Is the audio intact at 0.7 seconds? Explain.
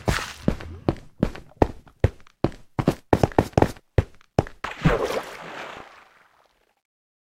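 Yes, the audio is intact at 0.7 seconds, with no fault audible at that moment.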